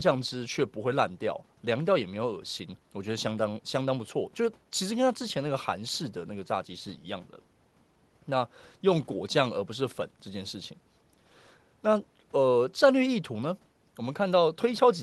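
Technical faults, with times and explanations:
No technical faults can be heard anywhere in this speech.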